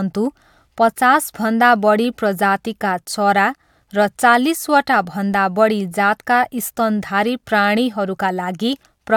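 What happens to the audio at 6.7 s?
Nothing goes wrong at 6.7 s; the speech runs through that moment intact, with no dropout, click or other disturbance.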